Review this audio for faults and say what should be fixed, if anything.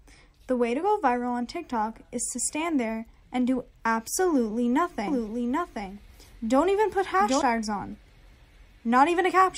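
A second capture path, likely a slower one, or an edit holding two copies out of step, mixes the same audio in twice from 5.08 to 7.42 s. This doubled audio track trails by roughly 0.7 s, a few decibels quieter, full-band and dry, starting and stopping abruptly. Prevent it by routing each source through a single capture path and checking edits for overlapping duplicate regions.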